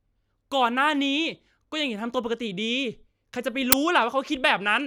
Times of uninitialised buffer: 3.72

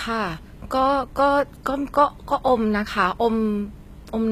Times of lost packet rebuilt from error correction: none

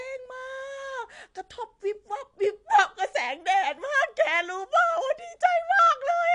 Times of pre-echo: none

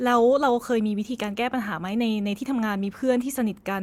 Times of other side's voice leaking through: none

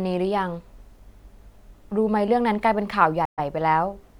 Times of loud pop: none

